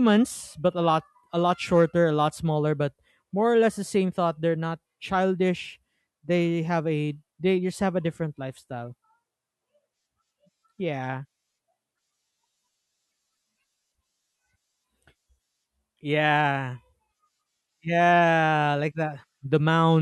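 No technical faults turn up anywhere in this speech recording, so there's nothing to pin to a timestamp.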